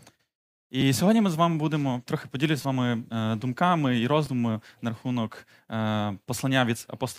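At 0.81 s, just before "сьогодні ми з вами", a repeated buffer occurs. New audio arrived late, so the last 5.8 ms block played again, which fits a 256-sample buffer. It is heard as a hard click. From 2.62 to 2.65 s, between "будемо трохи поділюсь з" and "вами е думками і", the block repeats four extra times. That gives a brief buzz, and about 20 ms of sound is lost. At 4.26 s, before "на рахунок е", one extra repeat causes another click.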